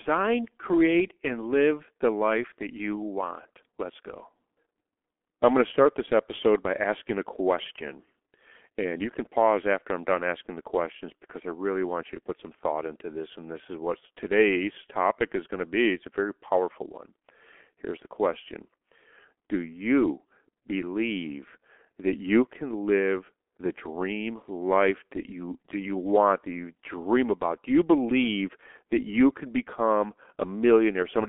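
Heavy G.723.1 codec damage runs throughout: the speech is confined to 250 Hz to 3.4 kHz with nothing above 3.7 kHz, and sounds muffled and hoarse, as a 6.3 kbit/s stream would.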